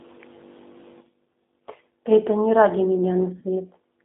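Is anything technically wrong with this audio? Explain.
Yes, there are two technical faults: speech codec damage throughout and two brief dropouts patched by the decoder.

G.729 codec, throughout the clip. The speech is carried by a low-rate model, consistent with G.729A at 8 kbit/s. The decoder rebuilds each frame from a vocal-tract filter, a pitch predictor and a sparse pulse excitation instead of the real waveform. The damage is plainly audible. The voice sounds rough and slightly synthetic, confined to a telephone band of roughly 200 Hz to 3.7 kHz, with nothing above.

VoIP packet loss concealed by the speech codec, at about 1.33 to 1.35 s and 3.40 to 3.43 s. Each gap matches about 20 ms of missing audio, which fits a single lost packet each time. The decoder filled the hole by extending its last pitch and filter settings at reduced gain. The result is a short stretched, fading patch, and the voice stays weakened or distorted for a moment after real audio resumes.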